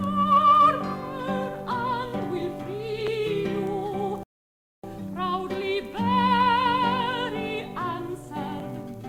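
At 4.23 s the music drops to silence for about 0.6 s, until 4.84 s. This is a rebuffering stall. The player ran out of downloaded audio and waited for more. Playback then resumes exactly where it stopped. Nothing is skipped, but 0.6 s is added.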